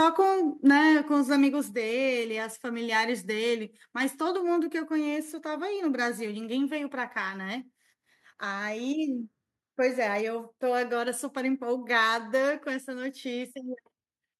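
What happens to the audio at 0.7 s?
From 0.67 to 0.70 s the loudest peaks are flattened by what sounds like microphone overload, likely an input volume set so high that peaks ran about 2 dB past the converter's ceiling. Roughly a tenth of the samples are squared off, giving a brief harsh crackle. The distortion rides on the peaks themselves, unlike noise or dropouts layered over the signal.

At 0.7 s the whole level drops by about 3 dB in one step, background included, which points to a microphone volume stepped down, likely by software reacting to that clipping. A single abrupt step right after the distortion sets it apart from a gradual fade or gain pumping.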